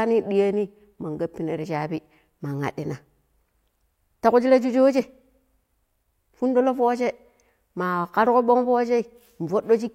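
Two unsynchronised clocks likely cause clock slip clicks, one sample dropped or repeated about every third of a second from 0.19 to 9.82 s, heard as faint regular ticks in the speech.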